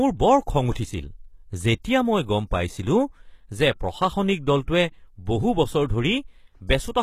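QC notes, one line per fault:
Throughout: HE-AAC compression, most likely, with plainly audible damage consistent with a bitrate near 20 kbps. The upper band is present but rebuilt. Lower harmonics copied upward under a coarse envelope make s sounds gritty and metallic or lispy, and the treble does not line up with the body of the speech. Content stops at 14.9 kHz. Plain MP3 or AAC at this rate would sound dull, losing its top, whereas here it stays bright but false.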